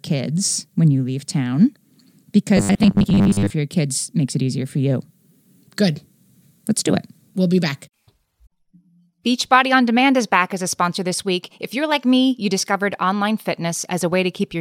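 From 2.57 to 3.55 s, just before "your kids makes it", the speech turns into a rigid, metallic 100 Hz buzz: robotic sound from repeated short buffers, likely from a 10 ms chunk looping while about half the real audio is skipped. A spectrogram shows evenly spaced 100 Hz harmonic bands, and the waveform shows identical cycles repeating.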